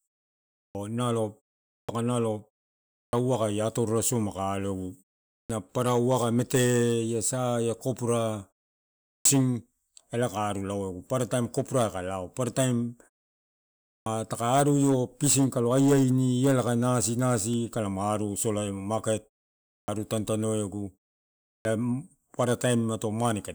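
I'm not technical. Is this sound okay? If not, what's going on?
No. This is clipped start after a pause: after each silence, the playback device wakes too slowly and swallows about 0.14 to 0.17 s of the speech at 0.58, 1.72, 2.99, 5.33, 9.1, 13.9, 19.71 and 21.49 s. With merely muted pauses, only background goes quiet. Here, the first sounds of words are lost.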